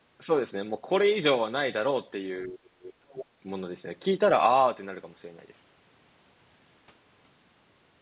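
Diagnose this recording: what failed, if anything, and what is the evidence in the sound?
Speech suppressed in double talk occurs between 2.46 and 2.94 s, in call processing. The speech sinks by roughly 30 dB for about half a second, likely because the echo canceller mistook overlapping near-end speech for echo. On a spectrogram this appears as a near-blank vertical gap. The waveform's envelope collapses there.

The other side's voice leaking through comes in from 3.09 to 3.26 s, also at the call-processing stage. A second, fainter voice sits roughly 15 dB below the talker, likely loudspeaker echo that the canceller didn't fully remove. It shows as a weak, separate harmonic pattern in the spectrogram.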